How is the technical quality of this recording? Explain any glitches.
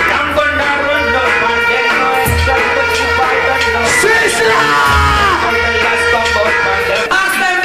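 Technical quality is held back by one fault that runs through the whole recording: hard clipping. The signal is driven about 4 dB past what a stage in the chain can pass, so the loudest peaks are sliced flat, though only a small fraction of a percent of samples are affected. Those squared-off tops create high harmonics, heard as brief crackle on peaks rather than constant fuzz. On a waveform the peaks appear as flat plateaus; a spectrogram shows thin vertical streaks of broadband energy at each clipped peak.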